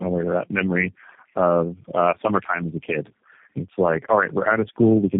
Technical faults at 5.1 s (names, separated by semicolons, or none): tandem speech coding